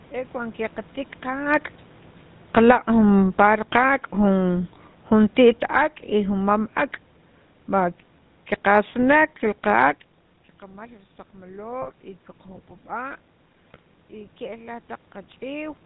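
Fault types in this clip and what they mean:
GSM full-rate codec, throughout: the speech is rebuilt from a vocal-tract filter driven by sparse, regularly spaced excitation pulses, leaving a plainly audible buzzy, gravelly roughness and nothing above 4 kHz, which fits the 13 kbps full-rate GSM codec.
automatic gain falling, 2.42 to 6.71 s and 8.59 to 9.88 s: the gain control found the input too loud or its background noise too strong and gradually pulled its gain down, by about 9 dB in the first stretch and about 4 dB in the second, so speech and background sink together.
GSM bit errors, 11.82 to 11.92 s and 13.71 to 13.79 s: flipped bits reached the decoder and corrupted its filter, pitch and gain values, so each burst of under 0.1 s breaks into squawks, pops and gargling, which fits a handful of damaged frames each time.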